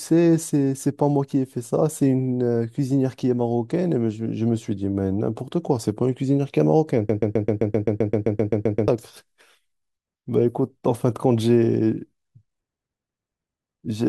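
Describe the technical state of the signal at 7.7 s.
At 7.7 s you're right in the middle of a broken-record loop running from about 7.09 to 8.88 s: a 130 ms chunk of the speech repeats back to back, 14 times over, with whatever should have played there gone. That's likely a stall upstream, replaying its last buffered fragment.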